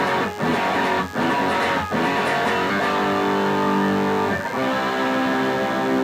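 From the first moment to the last there's a DECT cordless phone buzz sitting under the sound. A cordless handset or its base station close by is firing short radio bursts 100 times a second, and something in the audio chain is rectifying them, so you get a thin, steady 100 Hz buzz stacked with harmonics. It's well below the main signal, around 25 dB down, but that edgy, raspy tone never lets up.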